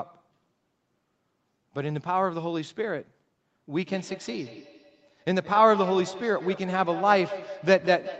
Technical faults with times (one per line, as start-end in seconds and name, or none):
3.85-8.19 feedback echo between two devices